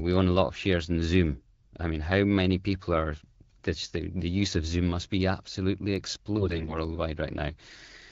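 From 6.38 to 6.78 s the speech turns hoarse, scratchy and gargly, while its pitch and loudness stay roughly in place. These are AMR bit errors. Over a weak link, the less protected bits of the AMR wideband frames arrived corrupted at a fairly high rate, roughly 15 percent, yet passed the check on the important bits. The decoder therefore placed its excitation pulses wrongly and misread fine pitch, gain and spectral detail across those frames, coded at a rate that fits 12.65 kbit/s.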